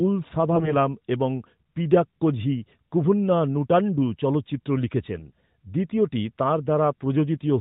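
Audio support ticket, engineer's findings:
AMR bit errors, 0.52 to 0.77 s, just before "এবং পিডাক্কোঝি কুভুন্না নুটান্ডু". Hoarse, scratchy, gargly texture; pitch and level roughly held. Flipped low-priority bits in the AMR decoder misplacing excitation pulses and skewing gain and spectral values. The span fits about a dozen 20 ms frames, at roughly 2% bit errors. Narrowband AMR path audible throughout, nothing above 4 kHz, consistent with the 12.2 kbps mode.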